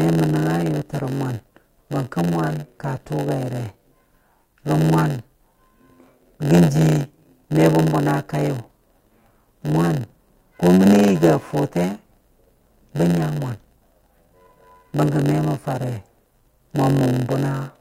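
From the first second to the end, the speech carries a steady buzz at about 92 Hz, and that's a block size mismatch with padding. One stage hands over blocks a bit shorter than the next stage expects, and the leftover space in each block gets filled with silence. Those tiny gaps repeat at the block rate, hence the buzz, and they stretch everything out so the speech plays at about 0.919 times normal speed while keeping roughly its normal pitch.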